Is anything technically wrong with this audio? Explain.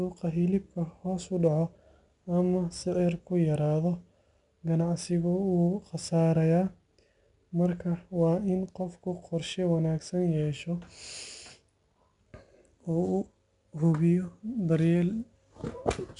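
Yes, two things. The whole speech clip carries 4-bit ADPCM compression: each sample is coded as a small step from a prediction, so the coding error rides along as a gritty hiss under every loud syllable, with smeared attacks. Nothing sits above 10.6 kHz, and the damage is plainly audible, consistent with roughly 89 kbps.

From 5.36 to 6.87 s there's sample clock jitter: the converter clock wobbles, roughly half a microsecond, so samples land slightly off time. The error tracks waveform slope, giving a faint roughness on loud, bright moments around 55 dB down.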